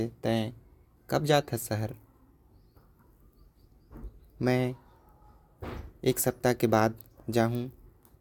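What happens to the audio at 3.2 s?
Nothing goes wrong at 3.2 s; the speech there plays through intact, with no dropout, click or distortion.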